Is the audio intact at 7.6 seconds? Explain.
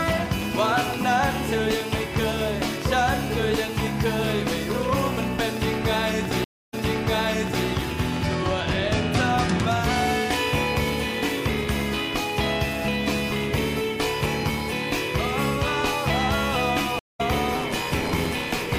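No. From 6.44 to 7.67 s there is a stream reconnect. The sound drops out for 282 ms, then fades back in at a point 940 ms earlier, so almost a second repeats. The connection broke, and the player rejoined mid-stream with a freshly started decoder.

Running through this moment, from 0.08 to 12.48 s, is a train of clicks: around seventy evenly spaced ticks at 5.82 per second, peaking about 10 dB above the sound and audible in gaps too. The likely cause is electrical interference or a faulty connection or power supply.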